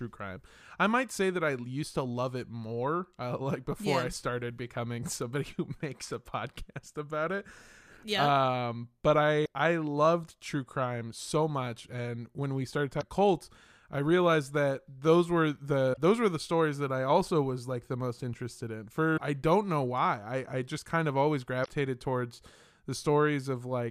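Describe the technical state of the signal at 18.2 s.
At 18.2 s the speech signal is intact, with no technical fault present.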